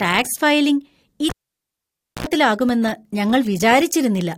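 A live cable was pulled out and plugged back in at 1.29 s, just after "ടാക്സ് ഫയലിംഗ്". Breaking the connection gives a pop, and the speech drops to near silence for about 0.93 s. As the plug goes back in, the tip touches first and picks up about 74 ms of 60 Hz mains buzz. A second pop marks the signal returning at 2.27 s.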